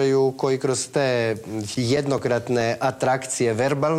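From 1.32 to 2.61 s, seven CD scratch ticks occur, one per disc revolution, where a blemish overwhelmed error correction and samples were concealed. They sound like brief clicks, the longest only a few milliseconds, showing as thin vertical broadband lines on a spectrogram and tiny flattened gaps in the waveform.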